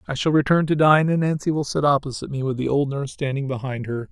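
From the start to the end of the speech, a slow flanging sweep moves through the sound, produced because the two sides are summed to mono. This is channels drifting apart: each channel was captured on a device with its own clock, differing by roughly 100 ppm, so the delay between them keeps growing, reaching about 0.4 milliseconds by the end. As that delay changes, the comb-filter notches from combining the channels glide steadily across the spectrum.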